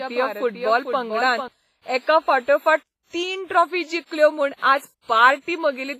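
A speech clip with heavy codec damage throughout: ringing, washy smearing and a hiss that rises and falls with the speech, with nothing above 15.5 kHz. This points to a likely cause of WMA compression at a low bitrate near 24 kbps. Unlike steady background noise, the hiss breathes with the signal. From the start until 1.48 s, just before "एकाफाटोफाट तीन ट्रॉफी जिखल्यो", a doubled audio track runs underneath. A full-band copy about 5 dB quieter trails roughly 0.4 s behind and stops abruptly. It has no decaying tail or room colour, which sets it apart from an echo or reverb.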